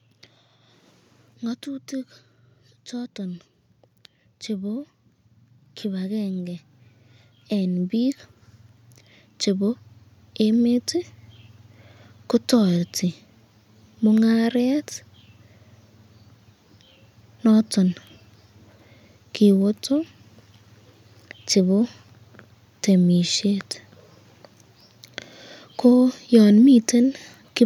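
From about 2.9 s to 10.9 s there's automatic gain rising: the AGC decided the input was too quiet and slowly cranked its gain up by about 16 dB. You hear the speech and the room noise swell together over those eight seconds.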